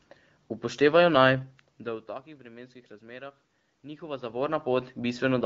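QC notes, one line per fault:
No faults found in this speech clip; the room background and the level shifts as the talker moves near 1.5 s and 4 s belong to the recording itself.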